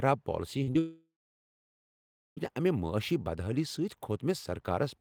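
Short concealed packet loss hits this speech clip at 0.63 to 0.69 s and again at 0.73 to 0.77 s, heard as brief smears where the receiver stretched the preceding sound to cover roughly 40 ms and then 20 ms of late audio before blending back. A long network dropout follows from 0.79 to 2.39 s. The concealed tail buzzes and fades, then about 1.3 s of silence remains, most likely because packets stopped arriving, before the audio resumes at "امہ معٲشی بدحٲلی" with the missing stretch gone.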